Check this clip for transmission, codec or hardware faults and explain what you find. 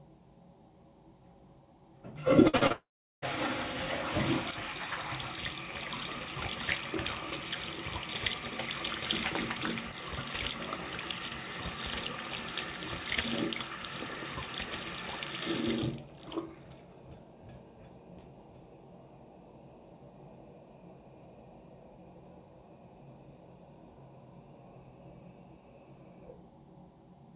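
There's a cluster of network faults between 2.48 and 3.24 s, all heard through a G.711 call path with nothing above 4 kHz.

Burst of packet loss at 2.48 to 2.55 s: about 60 ms went missing, and the receiver stretched the last sound into a short fading buzz or hiss before jumping ahead.

Short concealed packet loss at 2.57 to 2.63 s and 2.67 to 2.72 s: 40 ms gaps each time, patched by continuing the previous sound, so you hear quick smears or wobbles.

Long network dropout from 2.72 to 3.24 s: the last sound drags on as a fading buzz or hiss, then drops to near-silence for roughly 0.38 s before the audio resumes further on, likely because packets stopped arriving for about half a second.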